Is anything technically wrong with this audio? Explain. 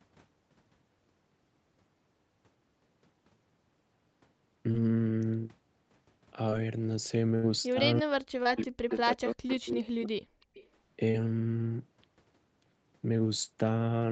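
Yes. Four kinds of fault are audible in this speech clip, all typical of a packet-switched call with a loudspeaker on one end. The audio tops out at about 8 kHz, consistent with a wideband call codec.

Short concealed packet loss occurs at 4.71, 6.49, 8.43, 9.47 and 11.11 s. At each point roughly 20 ms of audio failed to reach the decoder in time. The receiver papered over the hole by extending the preceding sound for about 18 to 27 ms before rejoining the real signal. Each event is heard as a tiny smear or wobble, and a brief consonant at that spot can disappear.

A burst of packet loss runs from 7.35 to 7.45 s. About 80 ms of consecutive audio was lost, which is too long for seamless concealment. The decoder sustained the last sound while fading it, so this stretch comes across as a held buzz or a decaying hiss. Playback then picks up further along, and the 80 ms in between is simply gone.

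Speech suppressed in double talk shows up as a brief dip of about 20 dB at 7.73 to 7.81 s. It is followed by a much longer episode from 8.02 to 10.23 s, where the level drops by as much as about 40 dB across roughly 2 s. The likely cause is an echo canceller that heard both sides at once, could not separate the near talker from the returned far-end signal, and clamped down on both. The result is speech that sinks, thins and breaks into fragments.

Echo leak is heard at 8.90 to 8.97 s and again at 10.41 to 10.69 s. A faint copy of the speech, about 25 dB below it, trails the original by about 339 ms. This likely comes from a loudspeaker whose output reached its microphone without being fully cancelled, and the residue was sent back into the call. It sounds like a delayed ghost of the speech.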